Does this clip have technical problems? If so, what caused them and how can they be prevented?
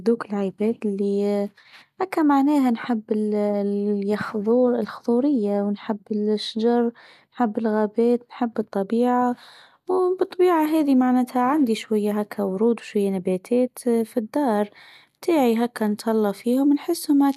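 No, there are no technical faults in this speech recording. With nothing to trace back to a cause, nothing needs to be prevented.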